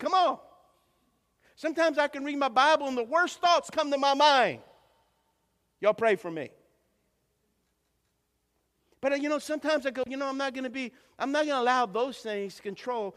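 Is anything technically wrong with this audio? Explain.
No, nothing technically wrong here.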